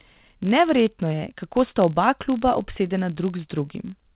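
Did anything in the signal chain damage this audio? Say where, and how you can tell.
Yes. The first fault sits in the processing stage, at a driver or buffer boundary: a filter restarted on every block. A steady buzz near 46.9 Hz runs under the speech for the whole clip. Its rate fits a 1024-sample block. The filter drops its memory at each block edge and starts again from silence. Each restart leaves a small transient, and the row of transients is heard as the buzz. It grows louder and softer with the speech.

The second fault is clock drift between sender and receiver, at the network and jitter-buffer stage. The sender's clock runs roughly 3 percent slow against the receiver's. The buffer keeps draining, so the receiver must keep stretching the stream to avoid running dry. The mismatch lasts the whole clip. It shows as a timing unsteadiness in the speech, and the stretching is the next fault.

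The third fault is repeated timing corrections, also in the buffer stage. From 0.03 s to 4.11 s the receiver repeats short pieces of audio, so the speech plays at about 97 percent speed. Together the repeats add roughly 150 ms. They all push the same way but come at uneven gaps. Each one is small. They sit over the call codec's band limit at 4 kHz.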